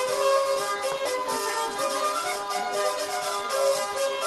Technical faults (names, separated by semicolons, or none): skip ahead